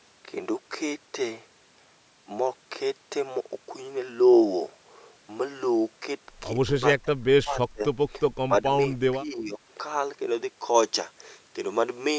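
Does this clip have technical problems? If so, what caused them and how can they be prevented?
Yes. An echo canceller, likely confused when both sides talked at once, turned this speech down with its echo (speech suppressed in double talk), causing dips and brief dropouts of up to about 30 dB at 7.02–7.55, 7.71–7.83, 8.49–8.81 and 9.11–9.59 s. Using a headset or a canceller with proper double-talk detection would prevent it.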